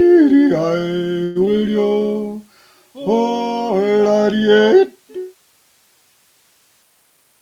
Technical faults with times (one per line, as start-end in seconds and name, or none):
1.23-1.37 call audio freeze
1.45-1.48 short concealed packet loss
7.10-7.40 jitter buffer speed-up